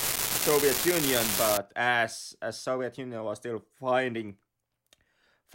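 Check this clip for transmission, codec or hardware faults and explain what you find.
One hardware fault is audible. From 0.0 to 1.57 s, ending just before "as as", an unreliable data bit adds a steady crackle. A marginal data line flips one bit in random samples, so every spike has the same size, about -9 dBFS, and the fizz continues through pauses, unlike signal-dependent clipping distortion.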